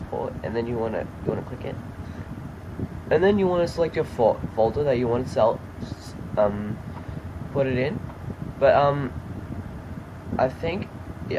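The audio shows no technical faults at any point, with the signal holding steady and intact throughout.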